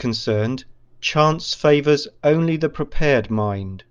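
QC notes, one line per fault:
No technical faults can be heard anywhere in the speech recording.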